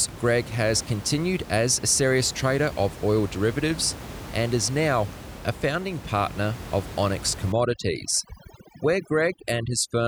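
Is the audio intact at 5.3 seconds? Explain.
Yes, the audio is intact at 5.3 seconds, with only the room's background noise sitting about 14 dB below the speech as part of the recording.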